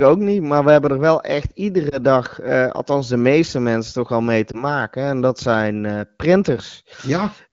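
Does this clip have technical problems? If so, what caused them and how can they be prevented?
Yes. Lost AMR speech frames: radio errors corrupted single 20 ms frames, which then failed their checksum. The decoder covered each gap by reusing the last good pitch and vocal tract settings at lowered gain. The result is a brief dip or warble at 1.89–1.99 s, after "hebben er wel echt", and at 4.51–4.64 s, after "mensen toch al mee". Better radio coverage and stronger channel protection would keep bit errors from reaching the decoder.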